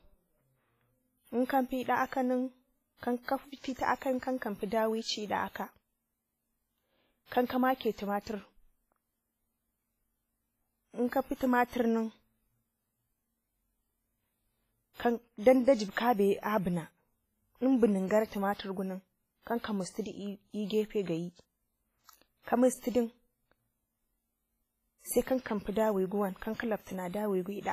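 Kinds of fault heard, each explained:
WMA compression: The speech rings and smears, with heavy codec damage and a hiss that rises and falls with the voice. Nothing is left above 15.2 kHz. This fits a low bitrate near 24 kbps, likely a WMA encoder spreading quantisation noise over long blocks.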